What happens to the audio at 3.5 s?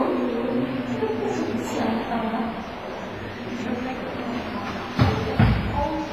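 At 3.5 s the sound carries the same damage heard from start to finish: a ringing, washy smear with a hiss that swells and fades with the signal. The likely cause is heavy WMA compression at a low bitrate, one that fits roughly 24 kbps. Long transform blocks spread quantisation noise across tens of milliseconds and zero out weak components. On a spectrogram this shows as a hard ceiling near 15.4 kHz, patchy holes below it, and pre-echo blurring onsets in the waveform.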